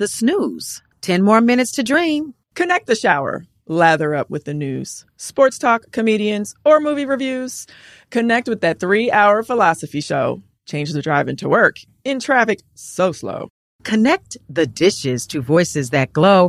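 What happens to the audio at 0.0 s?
Nothing goes wrong at 0.0 s: the audio is intact, with no dropout, click or distortion at that moment.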